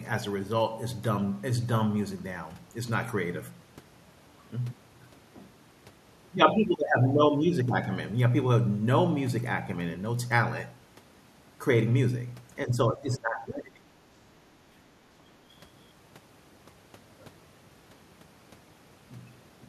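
From 12.65 to 14.08 s the speech sinks, falling by around 20 dB at its deepest before recovering. This is speech suppressed in double talk: the likely cause is an echo canceller that took overlapping talk for loudspeaker echo and attenuated the talker.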